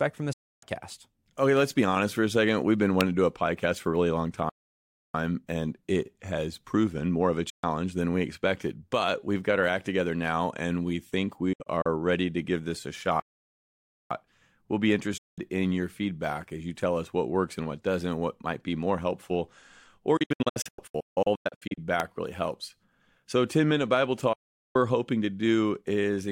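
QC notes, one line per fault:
0.33 to 24.76 s, digital broadcast dropout: the speech fades out in about 8 ms and goes silent at 0.33 to 0.63 s (about 290 ms lost), 7.50 to 7.64 s, 15.18 to 15.38 s and 24.33 to 24.76 s. At 11.53 to 11.86 s it breaks into short holes, the longest 64 ms. The worst is 20.17 to 21.78 s, between "be more helpful or" and "really helps", where about 900 ms goes missing in holes up to 160 ms long. The receiver mutes whenever frames fail, and the gap sizes fit frames of roughly 32 ms. Whatever was said in those gaps is gone.
3.01 s and 22.00 s, electrical switching spike: a sharp, very short snap lands on top of the speech, just before "to do a podcast" and again just before "really helps". Each lasts only a few milliseconds and doesn't interrupt the talk. It's an added burst, not a gap, which points to a likely arc from a nearby switch or static discharge getting picked up on the line.
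4.49 to 5.14 s and 13.20 to 14.11 s, playback stall: the speech stops dead mid-flow and stays silent for about 650 ms, then about 910 ms, before carrying on. The likely cause is the player running short of data or getting blocked until it caught up.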